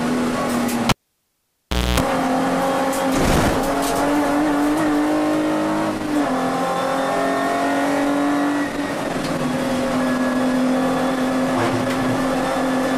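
The audio has a cable pulled and plugged in between 0.89 and 2.00 s. A pop marks the disconnection, and the signal then drops to near silence for about 1.06 s as the live lead leaves its socket. During reinsertion, about 0.26 s of 60 Hz mains buzz is heard while only the plug tip is making contact and the ground is not yet connected. A second pop follows as full contact is made and the sound returns.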